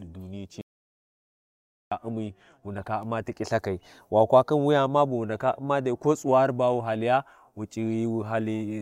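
An audio dropout to silence runs from 0.61 s to 1.92 s, removing about 1.3 s of the speech. The sound stops abruptly mid-flow and returns just as suddenly, and the gap between is silent with no room tone or background hiss at all. That points to the input signal being lost, likely through a disconnected device, a failed link or a brief mute, while recording carried on writing silence.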